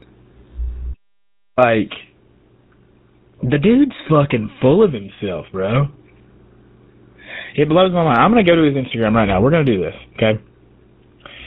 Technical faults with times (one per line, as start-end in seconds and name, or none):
0.00-11.47 GSM full-rate codec
0.93-1.59 playback stall